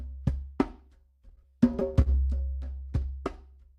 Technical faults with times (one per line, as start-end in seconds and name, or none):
1.15-2.42 repeated stalls (stutter)